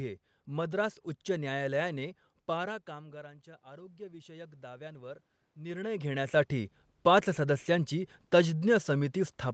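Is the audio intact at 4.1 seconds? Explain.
No. From 2.97 to 5.86 s, voice and room noise swell together as automatic gain rising adds about 8 dB after the input fell by about 18 dB.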